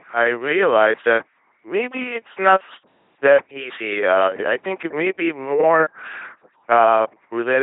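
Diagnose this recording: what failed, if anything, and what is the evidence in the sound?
The codec stage failed: the whole clip is speech squeezed through an LPC-10 vocoder, and it's badly damaged. Each moment is rebuilt as either pulse buzz or noise hiss through a small all-pole filter, hence the robotic sound. Nothing reaches above 3.8 kHz, which fits a 2.4 kbit/s coder.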